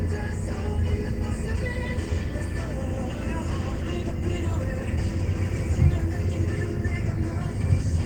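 No technical faults are audible in this recording.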